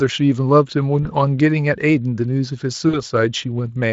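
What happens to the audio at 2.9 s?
At 2.89 s the speech smears into a brief buzzy tone or coloured noise that fades, and it stays weak or distorted until about 3.01 s. This is VoIP packet loss concealed by the speech codec: roughly 40 ms of audio, which fits two lost 20 ms frames, went missing. The Speex decoder filled the gap by extending its last pitch and filter at falling gain, then needed a few frames to recover.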